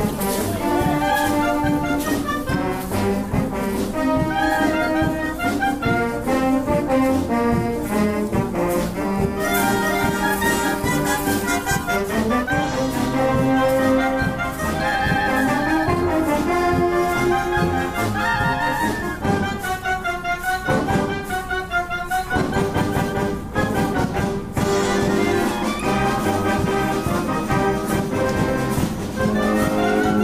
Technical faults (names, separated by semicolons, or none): pre-emphasis left on